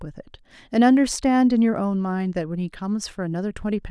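No technical faults can be heard anywhere in the speech. There is nothing here to place on a timeline.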